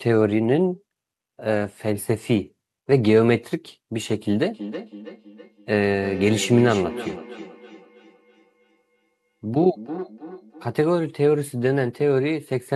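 From 4.51 s to 10.84 s there's feedback echo between two devices: a second device in the room replays the call and this microphone catches it again. Words return roughly a third of a second later, thin and ringing, about 14 dB under the speech.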